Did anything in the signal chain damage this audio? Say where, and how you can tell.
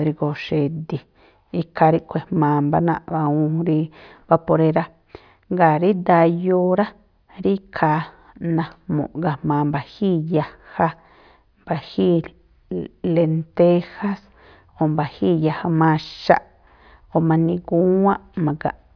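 No, nothing damaged this audio.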